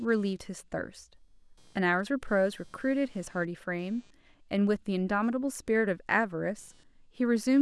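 Throughout the speech there is computer activity noise: a faint buzzing, chirping layer with a pulse rate of roughly 200 Hz, sitting around 40 dB below the signal. It comes from load changes in the processor, graphics hardware or mouse disturbing the ground that the audio circuit shares with the computer. Because it follows the machine's activity rather than the speech, the texture shifts independently of what is being said.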